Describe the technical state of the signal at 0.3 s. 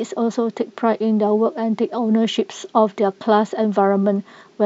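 Nothing is wrong with the signal at 0.3 s; the audio is intact there.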